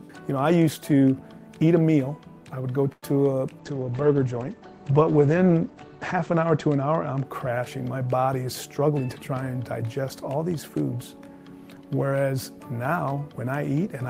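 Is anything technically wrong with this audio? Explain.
Yes, there are three faults.

From 2.92 to 3.04 s there is a call audio freeze. The sound stretches into a fading buzz that ends in about 40 ms of silence, then resumes where it stopped. The likely cause is packets held up in transit until the jitter buffer ran dry, so the receiver padded roughly 102 ms. Unlike a dropout, nothing is skipped; the stream is only delayed.

From 3.59 to 7.31 s a call bitrate drop makes the audio coarse and watery. The encoder fell from 32 to 14 kbps, holding the lowest rate for about 2.6 s, and the bandwidth narrowed from 20 kHz to 8 kHz, so it also sounds muffled. The grainy texture separates it from a plain low-pass filter.

From 8.33 to 9.29 s a jitter buffer speed-up makes the sound hurry at about 109% speed. The receiver trimmed pitch-period-sized slices, around a tenth of a second in total, to shrink excess buffered delay. 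Pitch stays unchanged, which distinguishes it from simply playing the audio faster.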